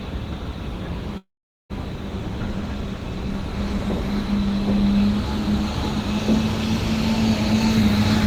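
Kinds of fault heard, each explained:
Long network dropout: from 1.17 to 1.72 s the sound stops short. The last bit gets stretched into a fading buzz, then there's roughly 0.44 s of near-silence before the audio picks up again. About 0.4 s of material is simply gone, and afterwards everything sits around 150 ms later than before. That pattern most likely comes from packets not arriving while the receiver papers over the gap.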